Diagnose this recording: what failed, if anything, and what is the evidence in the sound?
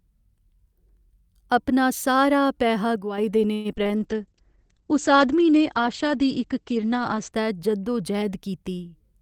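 A sudden gain jump sits between 2.96 and 3.18 s. Speech and background noise drop together by about 6 dB, with no fade. The stage is call processing. The likely cause is a digital gain setting applied from one sample to the next without a ramp.

Repeated packet loss, heard as robotic sound, runs from 3.53 to 4.01 s. This is a network fault. Several short holes follow each other, the longest 113 ms. Each is patched by stretching the last sound, so about 40% of the stretch is synthetic and choppy.

A call bitrate drop starts at 3.98 s and lasts until 7.38 s. The speech turns rough and muffled. Its top end falls from about 20 kHz to 8 kHz, which fits a fall from roughly 64 to 11 kbps. The network's bandwidth estimate dropped, and the codec coded more coarsely.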